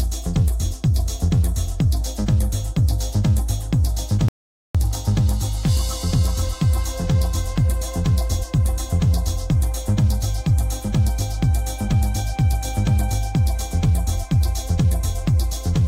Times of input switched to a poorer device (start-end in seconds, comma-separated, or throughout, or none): none